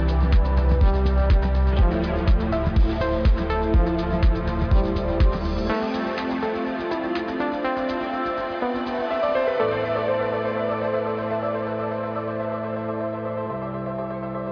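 Nothing here sounds off; there's no glitch or slip anywhere to point to.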